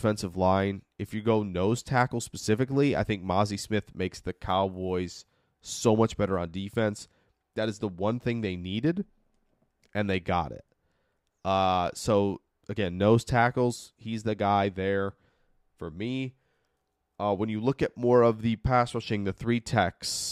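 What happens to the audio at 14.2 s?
Nothing goes wrong at 14.2 s; the speech carries on intact through that moment, with no dropout, click or distortion to be heard.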